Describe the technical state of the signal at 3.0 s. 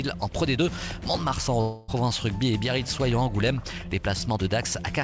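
At 3.0 s the signal is intact, with no fault, carried cleanly through the WebRTC call path, where the codec's band limit leaves nothing above 8 kHz.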